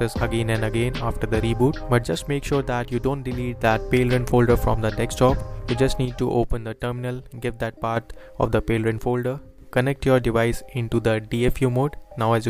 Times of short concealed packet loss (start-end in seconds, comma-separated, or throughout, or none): none